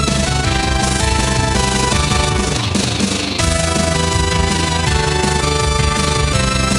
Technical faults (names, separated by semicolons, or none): overlap-add ripple